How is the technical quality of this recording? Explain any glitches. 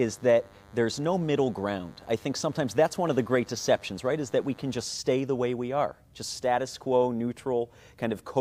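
The recording is marred by one interference fault at the start. From 0.0 to about 4.83 s, just before "stay the way we", a DECT cordless phone buzz runs under the speech. A nearby DECT handset or base transmits a brief radio burst every 10 ms, and the audio circuitry rectifies it, producing a thin, steady 100 Hz buzz rich in harmonics, sitting roughly 30 dB below the speech. On a spectrogram it shows as evenly spaced horizontal lines at 100 Hz multiples stacking upward. The waveform carries a regular pulse train at 10 ms spacing that stops abruptly near 4.83 s.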